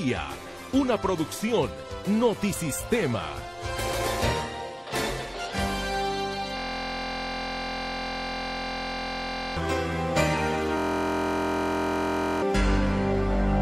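From 6.57 to 9.57 s and again from 10.77 to 12.42 s, a system hang loop replaces the audio with a steady buzz at 43.1 Hz: one identical 23.22 ms slice, which fits a 1024-sample buffer, replays while the system is frozen. Unlike mains hum, it is built from the sound itself, and about three seconds, then a second and a half, of real audio are lost.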